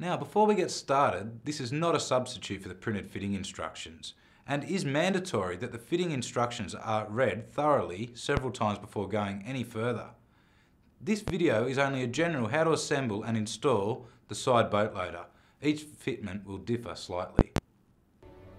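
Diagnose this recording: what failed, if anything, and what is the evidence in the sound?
Loud pops sit on top of the sound at 8.37–8.41 s, 11.28–11.31 s and 17.39–17.60 s, the last being two pops in quick succession. They peak about 20, 15 and 25 dB above the programme, which carries on underneath. On a waveform each is a tall, isolated spike, and a spectrogram shows full-height vertical lines. The likely stage is analogue wiring, where a voltage step from a plug, switch or static discharge is shaped by the circuitry that follows.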